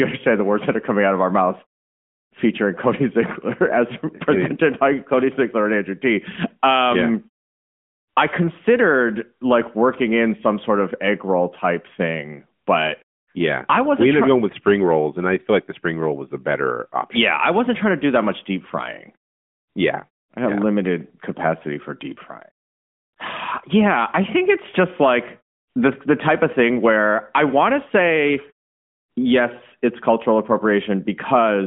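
Nothing in this speech recording stood out as a technical fault on listening.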